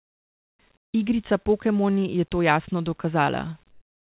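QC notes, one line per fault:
0.00–0.59 s, 0.77–0.92 s, 3.71–4.01 s: comfort noise in place of the background. Likely discontinuous transmission pausing the sender, so the receiver substitutes steady, featureless synthetic noise, about 24, 14 and 8 dB quieter than the real background.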